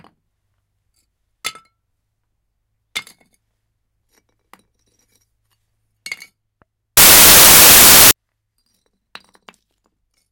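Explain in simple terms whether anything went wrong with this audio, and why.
Something did go wrong, from about 6.97 to 8.11 s: samples built from the wrong bytes. The player stitched each sample's bytes together wrongly, so the jittery fine detail became the main signal, and you hear a blast of loud, harsh noise.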